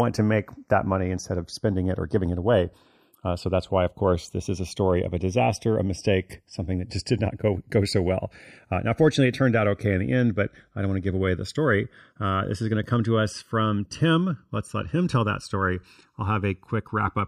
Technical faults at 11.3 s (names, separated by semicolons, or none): channels drifting apart